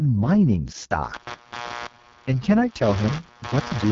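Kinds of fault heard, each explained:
AMR wideband (HD Voice) codec: The speech sounds rough and raspy throughout, with nothing above about 7.2 kHz. This points to AMR-WB at its lowest rate, near 6.6 kbit/s. There the pulse-driven model of the vocal tract runs short of detail, and the top band is filled with shaped noise.
Computer activity noise: From 1.13 s to the end, a buzz pulsing roughly a hundred times a second sits about 15 dB below the speech and does not follow it. This points to processor or other load changes disturbing the audio circuit's shared ground.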